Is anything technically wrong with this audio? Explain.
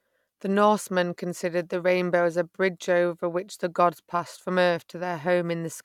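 No, nothing is technically wrong with this speech recording. No faults can be heard anywhere in it.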